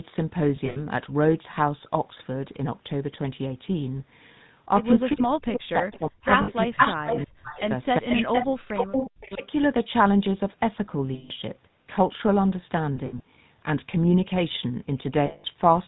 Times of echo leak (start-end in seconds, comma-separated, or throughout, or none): 5.92-9.47